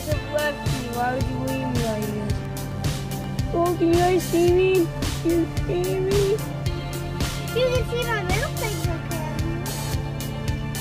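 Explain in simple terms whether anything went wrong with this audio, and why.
Between 2.45 and 3.24 seconds you can hear four quick ticks, the longest gone in a couple of thousandths of a second. These are CD scratch ticks: a mark on the disc ruined a bit of data on each turn, and the player patched over the gap.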